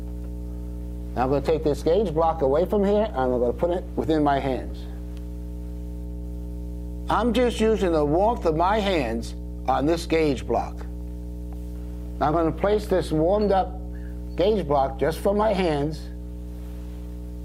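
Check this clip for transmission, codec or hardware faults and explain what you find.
There is one hardware fault, present from start to finish: mains hum. Power-line energy is getting into the signal path, most plausibly through a ground loop between connected pieces of equipment or from a transformer close to the cabling. It is heard as a steady low tone at 60 Hz, with some low harmonics above it. The hum sits only around 10 dB below the wanted sound, so it is clearly audible beneath everything.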